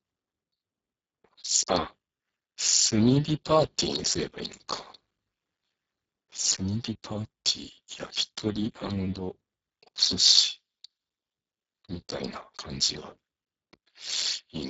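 Throughout, heavy Speex codec damage makes the speech hoarse, noisy and near-robotic, the starved CELP excitation fitting a bitrate near 6 kbps; nothing remains above 7.7 kHz.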